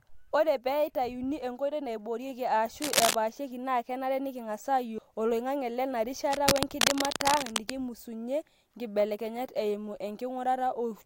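A burst of dense, uneven scratching cuts across the speech just after "nkoitoi naiboorieki", from 2.82 to 3.15 s, sitting about 5 dB above the speech level. A longer rustle follows after "oloingange lena", from 6.26 to 7.76 s, roughly as loud as the speech. Both are cable scratch noise, likely from a worn cable or connector being moved, its contact resistance jumping erratically and injecting ragged noise bursts into the signal.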